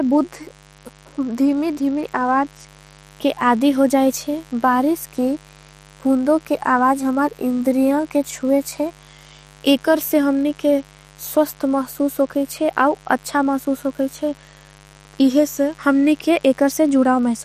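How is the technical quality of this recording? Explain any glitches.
A steady, raspy buzz sits under the speech for the whole recording, about 30 dB below it. That is mains buzz: sharp switching spikes from a dimmer, rectifier or unshielded line leak in twice per 50 Hz cycle. Their harmonics stack up into the kilohertz range, giving a gritty edge rather than a smooth hum.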